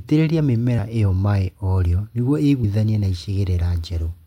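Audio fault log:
2.63 s compressed frames skipped: a brief smeared blip as the sound lurches ahead around 50 ms, about two 26.1 ms frames never decoded, overlap softening the join.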